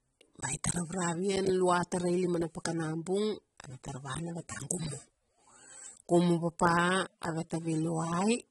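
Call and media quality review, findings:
Speech dull and smeared for the whole clip, nothing above 11.8 kHz, gritty sibilants. Likely AAC compression starved of bits, fits roughly 24 kbps.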